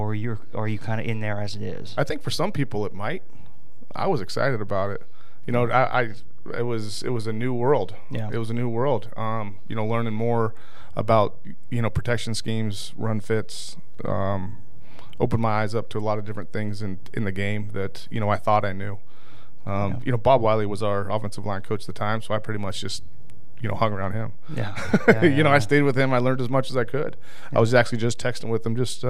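A speech recording carrying a DC offset throughout, with the whole waveform sitting off the zero line by a constant of about -23 dBFS. It is inaudible as such, but it eats headroom, and a spectrogram shows a steady band pinned at 0 Hz.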